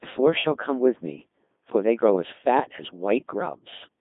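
Codec 2 vocoder damage runs throughout: the decoder rebuilds the speech from sine waves using only pitch, voicing, energy and a coarse spectral envelope, so it sounds heavily robotic and buzzy, confined to about 200 Hz–3.6 kHz with nothing above 3.7 kHz, which fits roughly 2.4 kbit/s.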